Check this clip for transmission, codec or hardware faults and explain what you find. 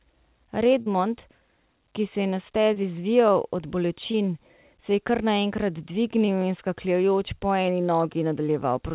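The clip has four short concealed packet losses, at 0.82 to 0.88 s, 2.74 to 2.78 s (between "ki se je na" and "zvijal od"), 4.12 to 4.16 s (just after "zvijal od") and 6.26 to 6.30 s. Each time, a stretch of the call, about 40 ms in the first case and about 20 ms in the others, failed to reach the decoder in time. The receiver extended the preceding sound to cover the hole and crossfaded back, leaving a brief smear or wobble. All of this passes through a narrowband call codec with nothing above 4 kHz.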